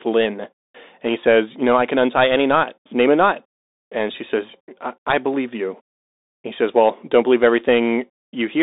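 A speech recording passed through a Bluetooth CVSD headset codec for its whole length. The band runs from 250 Hz to 3.7 kHz, with nothing above 3.8 kHz. One-bit delta coding, consistent with a 64 kbps link, leaves scratchy s sounds and a granular hiss.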